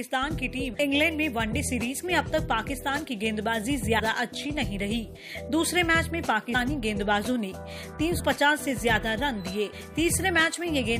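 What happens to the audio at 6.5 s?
At 6.54 s the audio jumps ahead, a case of compressed frames skipped. A run of coded frames, about seven of them, never gets played. They were either missing or rejected by the decoder as damaged. Each frame lasts 23.2 ms, which fits a 1024-sample frame at 44.1 kHz, so roughly 150 ms of audio is lost. With a lossy codec, overlapping frames make the join a brief smeared blip; with a lossless one, it is a hard click.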